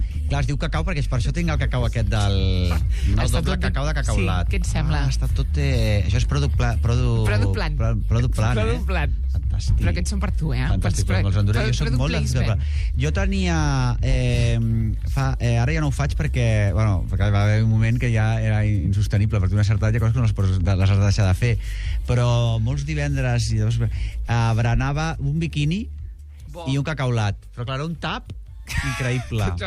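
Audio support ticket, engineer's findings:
No faults found on listening; no dropouts, clicks, distortion or level problems heard anywhere in the clip.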